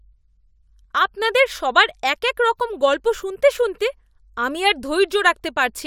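Nothing technical goes wrong anywhere in this speech recording, so there's no fault to point to.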